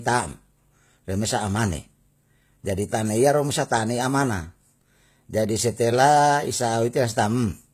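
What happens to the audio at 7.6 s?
At 7.6 s the speech still carries the HE-AAC compression heard through the whole clip. The bright but gritty, lispy s sounds suggest the treble is likely rebuilt by spectral band replication from lower bands, up to a hard ceiling near 14.9 kHz, which fits a very low bitrate around 20 kbps. A plain low-pass would sound dull instead.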